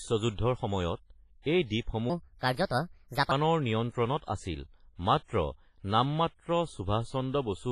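From the start, the speech sounds washy and ringing. This is likely WMA compression at a low bitrate, near 24 kbps. From 2.10 to 3.32 s, a section plays at the wrong speed, 1.34 times too fast. The speech turns hurried and about five semitones higher.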